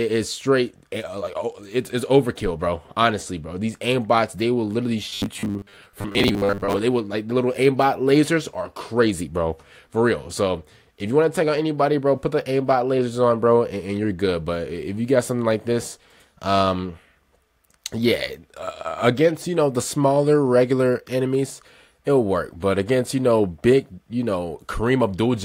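From 5.09 to 6.79 s the sound turns into a rigid, metallic buzz at 100 Hz, robotic sound from repeated short buffers. The likely cause is a 10 ms slice replayed whenever fresh audio ran late, with roughly half the passage repeated. On a spectrogram this appears as evenly spaced harmonic lines, and the waveform shows identical cycles.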